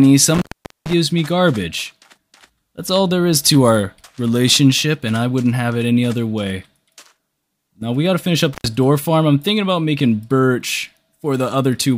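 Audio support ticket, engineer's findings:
Sound drops out with crackle at each edge and faint hiss in the gap, at 0.34–0.93 s (about 0.44 s open) and 8.53–8.66 s (about 81 ms open). Intermittent contact: a loose cable or plug momentarily breaking the signal path.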